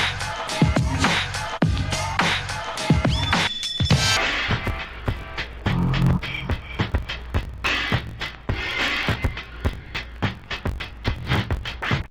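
From 4.17 s to the end, interleaved audio is read as planar. Each 21.33 ms block, which fits a 1024-sample buffer, is split into halves played at half speed, so the sound drops an octave and doubles while keeping its original pace. That steady tempo and a choppy 46.9 Hz block flutter separate it from plain slowed playback.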